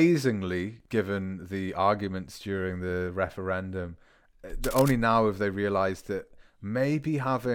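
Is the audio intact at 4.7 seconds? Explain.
No. From 4.64 to 4.93 s there is cable scratch noise, likely from a worn cable or connector being moved so its contact resistance jumped about. That injects dense, irregular bursts of crackle, roughly 10 dB below the speech, heard as a brief scratching rustle over it.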